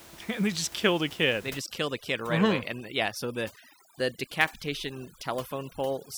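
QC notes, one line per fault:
1.50–6.17 s, overdone noise removal: room noise drops and breaks up into twinkling specks, as over-strong noise reduction cuts quiet bands.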